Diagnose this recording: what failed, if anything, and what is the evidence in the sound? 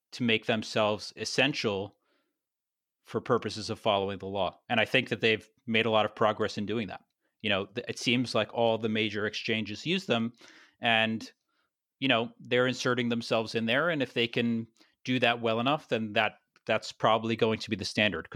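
The converter stage failed here: sample clock jitter from about 13.04 to 16.24 s. The speech picks up a fine hiss and roughness that tracks loud, bright moments and drops away in pauses. An unstable clock, wandering around a microsecond, mistimes samples, leaving error roughly 40 dB below the signal.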